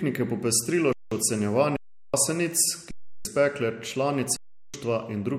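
Underrun with held sample at 0.93–1.12 s, just after "je popestrilo", then at 1.77–2.14 s, 2.91–3.25 s and 4.37–4.74 s. Each time the output buffer ran empty and the converter held its last value, so the speech stops dead into a flat hold of 0.19, 0.37, 0.34 and 0.37 s. Live audio was lost meanwhile, roughly 0.2 to 0.4 s per gap. The 0.19 and 0.37 s holds fit 8192- and 16384-sample buffers.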